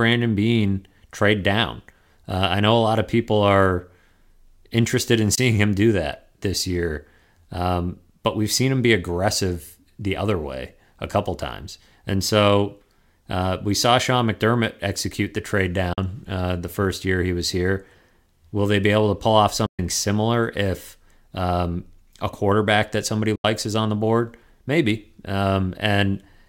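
Four silent holes cut into the speech at 5.35–5.38 s, 15.93–15.98 s, 19.66–19.79 s and 23.36–23.45 s, lasting about 20, 40, 120 and 80 ms. They are likely Bluetooth dropouts, where audio packets arrived too late and were discarded. Speech resumes as though it had kept playing. On the waveform and spectrogram each appears as a sharp-edged blank gap.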